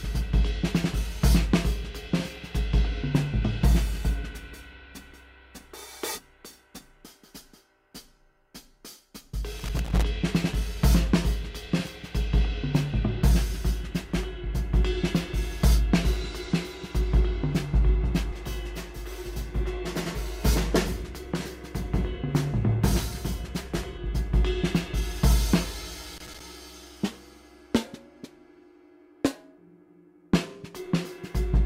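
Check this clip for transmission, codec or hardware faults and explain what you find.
Two short hardware faults are present, both loose connector crackle, from 9.59 to 10.03 s and from 26.17 to 26.40 s. Each is an irregular burst of scratchy crackle lasting under half a second. A worn or dirty contact is rapidly making and breaking, chopping the audio, and any DC on the line turns each break into a pop.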